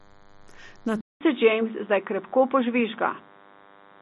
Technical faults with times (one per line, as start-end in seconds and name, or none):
0.00-4.01 DECT cordless phone buzz
1.01-4.01 input switched to a poorer device